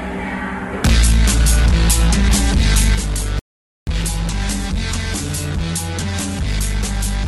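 A music clip with two separate faults. At 2.95 s the level drops abruptly by about 6 dB and stays down to the end. The likely cause is one channel dropping out, so the mono sum keeps only half of the shared material. The second fault is a rebuffering stall from 3.39 s to 3.87 s. The music cuts to dead silence there. It then picks up exactly where it stopped, with nothing skipped. The player ran out of downloaded audio and waited for more to arrive. The gap adds 0.48 s to the running time.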